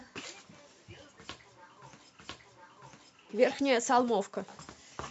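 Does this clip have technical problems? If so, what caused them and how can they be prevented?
Yes. At 2.19 s the speech jumps back and a full second of it plays a second time, running to 3.19 s, with a small blip marking the jump, so the passage is heard twice. This is a stream segment repeated: the player fetched or queued the same segment twice and played both copies, adding 1 s to the clip. Tracking segment sequence numbers and discarding any segment already buffered would prevent it.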